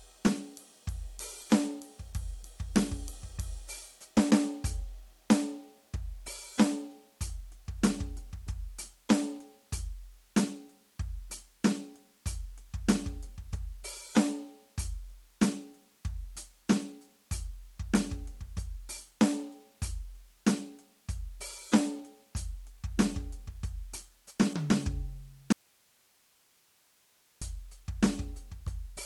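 At 25.53 s the music cuts out abruptly for about 1.9 s, leaving only faint hiss roughly 35 dB down, an audio dropout to a faint residue, likely a live path losing its input.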